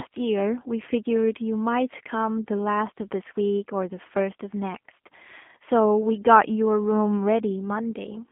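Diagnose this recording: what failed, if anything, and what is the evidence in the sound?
The codec stage failed: the speech passed through a G.729 codec, most likely the G.729A variant, across the whole recording. The line band runs from about 200 Hz to 3.5 kHz, with nothing above 3.6 kHz, which points to narrowband telephony at around 8 kbit/s. The codec rebuilds each frame from a vocal-tract filter, a pitch predictor and a few coded pulses instead of the real waveform. The speech therefore sounds plainly rough and synthetic.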